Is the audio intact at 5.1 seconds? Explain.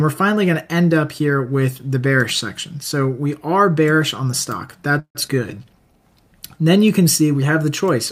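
No. From 4.99 to 5.17 s there is a call audio freeze, most likely because packets were delayed and the jitter buffer ran dry. The last sound is carried on as a fading buzz or hiss for about 0.16 s, and the final 80 ms of that fill has faded to silence. The audio then resumes where it stopped, so nothing is lost but everything after is about 155 ms late. A spectrogram shows smeared, repeating bands fading into a blank column. The waveform shows a decaying envelope dropping to a near-flat line.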